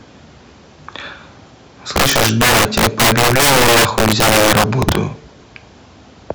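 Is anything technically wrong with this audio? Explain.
Yes. From 1.96 to 4.95 s, the speech shows integer overflow. The signal is driven about 12 dB too hot, and samples past the integer limit wrap to the opposite sign instead of being held. Loud syllables break into violent cracks, far harsher than clipping.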